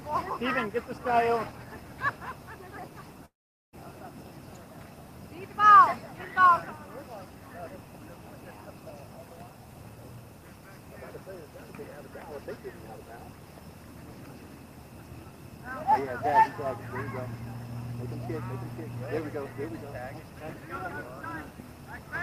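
Audio with one gap from 3.25 s to 3.75 s: the last sound trails into a brief fading buzz, then 430 ms of silence, and playback resumes with 480 ms of material missing. The likely cause is a long network dropout that outlasted the receiver's concealment.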